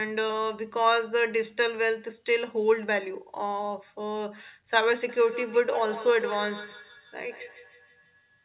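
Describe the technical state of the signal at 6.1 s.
Feedback echo between two devices is present at 6.1 s, within a span running from 5.09 s to the end of the clip at 8.44 s. A second device in the same room replays this speech, and its sound leaks back into the microphone, beyond the reach of the local echo canceller. Each syllable returns roughly every 150 ms, thinner and ringing, peaking about 13 dB below the speech, over a band that stops at 4 kHz, consistent with a G.711 call codec.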